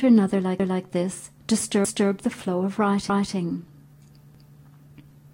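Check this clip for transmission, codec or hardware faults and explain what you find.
The clip has one fault, overlapping chunks, heard four times. At 0.60, 1.85, 3.10 and 4.35 s, a 250 ms stretch of sound plays a second time. The audio was split into 1.0 s chunks, and each chunk restarted a quarter second before the previous one finished, so the joins fall every 1.25 s and each one stutters. Unlike a dropout or buffer underrun, nothing goes missing or turns silent. The material is duplicated, and the repeats come at a fixed, regular spacing.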